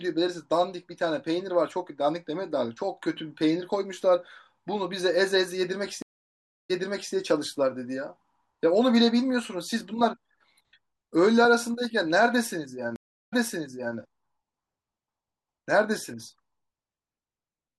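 Speech with two stream reconnects, at 6.02–7.13 s and 12.96–13.97 s: flat-line gaps of 0.64 s and 0.33 s, then the waveform fades back in 0.47 s and 0.68 s earlier, replaying audio.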